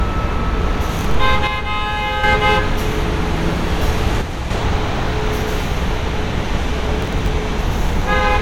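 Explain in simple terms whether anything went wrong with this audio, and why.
Two kinds of fault can be heard.

From 0.89 to 1.15 s, and again from 7.01 to 7.28 s, the sound breaks into a short burst of gritty crackle, like tearing paper laid over it, and then clears. This is processor overload crackle. The computer handling the audio fell behind and, again and again, failed to deliver its next small slice of sound in time. Each missing slice was simply skipped, leaving a tiny gap with hard edges. The pattern fits around twenty slices of a few thousandths of a second each, lost in a row.

From 1.47 to 2.24 s, and more briefly from 4.21 to 4.50 s, the sound suddenly gets noticeably quieter, then jumps back to normal. This is most likely one channel dropping out: one side of the stereo pair went silent for a moment. With only one side left, whatever both sides shared plays at a clearly lower level until the missing side comes back.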